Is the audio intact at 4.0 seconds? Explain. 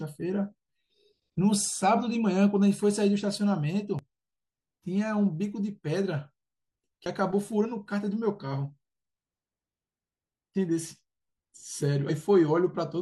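No. At 3.99 s the speech hits damaged data in a compressed stream. Some of the encoded bytes at that point are corrupt, so the decoder cannot parse the frame it expects, loses its place in the stream and has to hunt for the next valid frame header before it can resume normal decoding. That brief failure reaches the ear as a chirp, squawk, click or short hole that cuts across the speech for a single moment.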